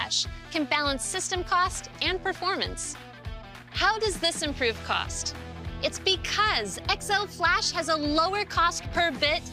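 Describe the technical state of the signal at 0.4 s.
At 0.4 s, mains hum runs through the whole clip: a steady 60 Hz tone, around 20 dB below the signal, from ground-loop or transformer coupling, visible as a constant low spectrogram line.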